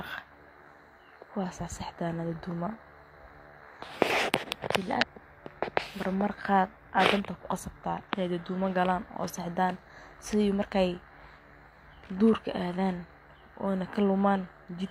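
At about 4.97 to 5.04 s the speech hits a patch of damaged data in a compressed stream. The decoder chokes on corrupted frames, loses its place and hunts for the next valid header, so you get a short glitch.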